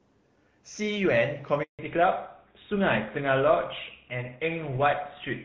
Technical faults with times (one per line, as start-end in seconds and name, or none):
1.63-1.79 handover gap
1.79-5.45 fallback to narrowband